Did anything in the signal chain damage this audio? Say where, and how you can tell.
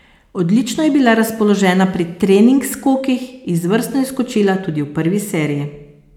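No, nothing in the signal chain damaged this audio.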